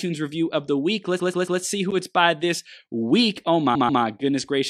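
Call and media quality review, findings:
Repeated frames, 1.19–1.60 s, after "review of the week", before "see who it's by": stutter as a 139.3 ms block replays three extra times, adding 418 ms. Fits a run of about six compressed frames resent or rewritten. Probable component: packetizer or encoder output buffer.

Repeated frames, 3.74–4.02 s, after "it's by this week": same 139.3 ms block length, two extra plays, adding 279 ms. Same duplicated-frame mechanism in the same component.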